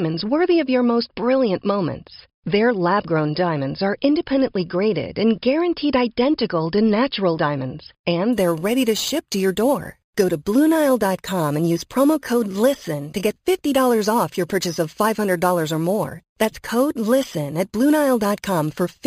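From 8.33 s, right after "identical to natural diamonds", imaging from sample-and-hold upsampling begins and runs to the end. Each sample was simply repeated to reach a higher rate, with no smoothing filter. That fits a jump from about 11 kHz to 48 kHz. Mirrored copies of the spectrum sit about 19 dB below the speech. The lowest copy lies between 5.5 kHz and 11 kHz. It adds a bright metallic fizz that swells with the speech, and it drifts opposite to the pitch.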